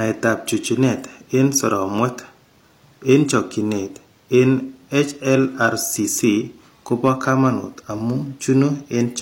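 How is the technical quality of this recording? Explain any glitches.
One glitch stands out: a short burst of hard clipping from 7.05 to 7.47 s in the speech. For that stretch the signal runs about 2 dB past what a stage in the chain can pass, so the waveform peaks are sliced flat rather than rounded. Those flat tops add harmonics high in the spectrum, heard as a brief crackly edge on the loudest moments. Unlike soft saturation or a limiter, which round or pull down peaks gradually, this distortion switches on abruptly at the ceiling and sounds gritty.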